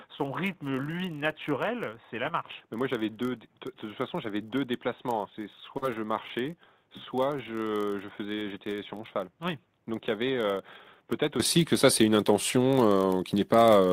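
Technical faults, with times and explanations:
Throughout: block size mismatch (padded). Short blocks are zero-filled up to what fits 1024-sample reads, adding a 43.1 Hz buzz and slowing the speech imperceptibly, 0.999 times.
0.00–11.40 s: input switched to a poorer device. Likely a lower-grade input was in use, narrower in band, about 10 dB quieter, with noise roughly 40 dB down; it clears without a gap.
5.77–5.84 s: short concealed packet loss. About 40 ms never arrived, and the receiver extended the preceding sound for 44 ms, leaving a brief smear.
5.82–5.88 s: lost packet rebuilt from error correction. Two lost packets were replaced by low-bitrate in-band copies, making 40 ms sound rougher and noisier with no gap.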